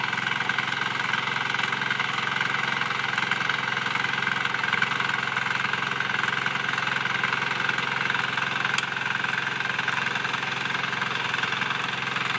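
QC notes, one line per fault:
Throughout: resampler restarted on every block. A buzz at 50 Hz sits under the sound wherever there is signal. The rate converter handled each 20 ms block on its own. At every block edge its filter worked from absent or wrong neighbouring samples, leaving a small error once per block. At 50 edges a second those ticks merge into a steady buzz. The pattern fits a 48 kHz to 16 kHz conversion.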